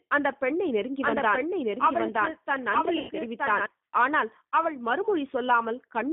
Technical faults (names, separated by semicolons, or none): G.729 codec; doubled audio track; VoIP packet loss concealed by the speech codec